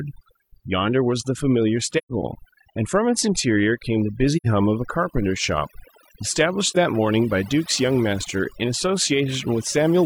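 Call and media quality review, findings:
Overdone noise removal, whole clip: background near-silent with twinkling specks. Over-aggressive denoiser gating bands near its noise estimate. Spectrogram shows isolated blips over black.

AAC frame loss with muting at 1.97–2.12, 4.36–4.47 and 6.70–6.77 s: soft-faded gaps. Lengths fit three, two and one lost frames, with the decoder muting each. Waveform tapers to flat in the first two, a brief dip at the third.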